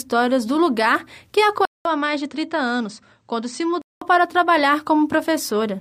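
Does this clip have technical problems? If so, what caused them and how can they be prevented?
Yes. Input switched to a poorer device, from 1.65 to 4.02 s: after a 200 ms gap the speech loses everything above 8.5 kHz, drops by about 5 dB and gains a faint new hiss. The likely cause is that recording moved to a narrower-band microphone, then back. Locking the input device in the system settings and disabling automatic device switching prevents this.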